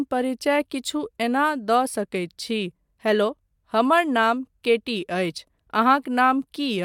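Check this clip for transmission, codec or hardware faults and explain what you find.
No faults detected in this clip.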